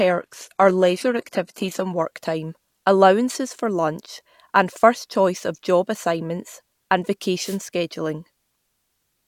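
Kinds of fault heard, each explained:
Adaptive stream starting at a low bitrate: The player opens on a thin, low-bitrate version, with dull or synthetic-sounding treble and heavier codec artefacts, then jumps to fuller sound at 2.0 s, just before "time allowances for lunch". That fits a step from about 20 kbit/s HE-AAC to 96 kbit/s AAC-LC. Unlike a dropout, the change comes with no gap.
Wireless microphone noise hit: The FM radio link briefly fades as reflections cancel, and receiver noise swells into a short swish of static from 7.41 to 7.59 s, right after "of job assignments and". Unlike a digital dropout, it is a burst of hiss rather than silence.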